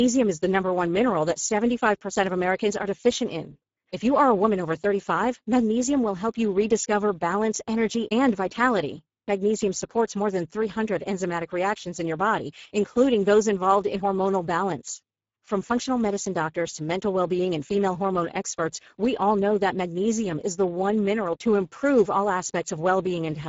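From start to finish the speech carries plainly audible Speex codec damage. The coarse, hoarse grain points to a low-quality setting of about 10 kbps, where this CELP coder has too few bits to model the excitation faithfully, so voiced sounds come out rough. Nothing is present above about 7.7 kHz, and the upper band that remains sounds like a noise-like fill rather than real detail.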